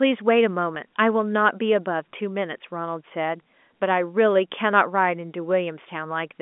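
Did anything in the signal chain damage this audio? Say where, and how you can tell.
Yes. Packet loss with pitch repetition at 0.75 s, in the network: a 10 ms gap, fitting one lost packet, was bridged by repeating the last pitch period, leaving a brief buzzy hold.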